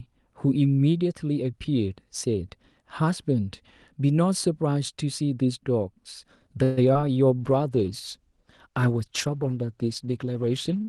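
A speech recording carried over an Opus call path, whose 12 kHz bandwidth shows as a clean ceiling on the spectrogram before the trouble starts, runs into four network faults of three kinds in its second half. From 6.63 to 6.79 s there is a call audio freeze, likely from packets stalling in transit and draining the jitter buffer. The receiver stretches the last sound into a fading buzz or hiss for about 138 ms. On a spectrogram this appears as a smeared, decaying band, and in the waveform as a tapering envelope. Nothing is lost: the speech resumes where it stopped, so everything after it sits about 138 ms later. Just after, at 6.93 to 6.97 s and again at 7.01 to 7.13 s, short concealed packet loss removes about 20 ms of audio each time. The decoder patches each hole by extending the preceding sound and blending back, which is heard as a brief smear or wobble. It shows as short stretches of blurred, repeated harmonics in the spectrogram and slightly irregular cycles in the waveform. 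The second patch also adds roughly 20 ms of delay. From 7.42 s to the end, a call bitrate drop cuts the encoder from 48 to 16 kbps for the remaining 3.5 s. The voice turns rougher and more muffled. On the spectrogram the upper band thins and its ceiling falls, while the fine detail between harmonics coarsens into blocky, watery texture.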